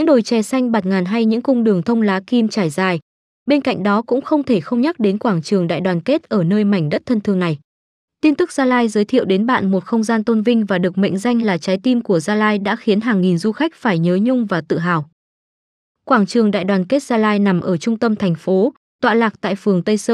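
No technical faults can be heard anywhere in this recording.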